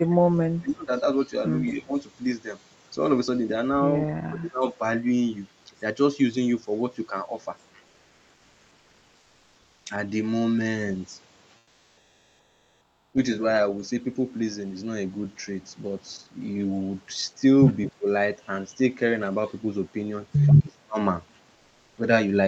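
From 0.0 to 0.92 s the speech sinks by about 30 dB. This is speech suppressed in double talk: the echo canceller, likely hearing both sides at once, turned the near talker down with the echo.

At 1.67 to 1.73 s a faint echo leak surfaces, about 25 dB below the speech and trailing by 220 ms, likely residue the canceller missed. The suppression follows at once, a shallower dip of about 15 dB from 1.73 to 1.93 s. A deeper one of about 25 dB hollows out 4.16 to 4.81 s.

From 7.87 to 9.85 s the background turns smooth and featureless, about 1 dB quieter. It does the same from 11.59 to 13.09 s, this time about 5 dB down. This is comfort noise in place of the background, likely because Opus DTX stopped sending during the pauses and the receiver filled them with synthetic noise.

A second echo leak comes at 17.85 to 17.92 s, louder at about 20 dB below the speech, with the same 220 ms delay. A brief suppression of about 20 dB follows at 17.97 to 18.07 s. 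The last one, from 20.59 to 20.99 s, drops the speech by about 30 dB.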